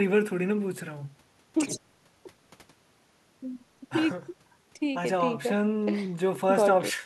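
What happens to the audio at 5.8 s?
Nothing goes wrong at 5.8 s: the speech there plays through intact, with no dropout, click, distortion or other fault.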